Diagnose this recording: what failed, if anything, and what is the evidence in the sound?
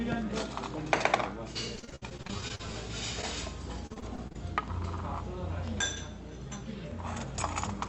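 Repeated packet loss (robotic sound) in the network stage: from 1.75 to 2.74 s, twelve gaps up to 58 ms long leave about a third of the span concealed; from 3.87 to 4.36 s there are six gaps up to 33 ms. The receiver stretches the last sound into each hole, so the audio turns choppy with pieces missing. On a spectrogram this appears as smeared, repeated vertical slices.

Short concealed packet loss, also in the network stage: at 3.21 to 3.25 s about 20 ms of audio never arrived, and the decoder patched it by extending the preceding sound before blending back in. It is heard as a brief smear or wobble. The waveform shows a short, too-regular stretch at that spot.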